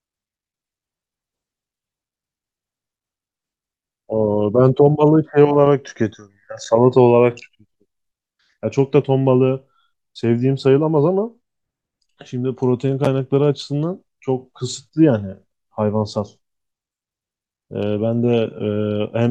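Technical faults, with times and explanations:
Nothing technical stands out anywhere in this speech recording, so there's no fault to list here.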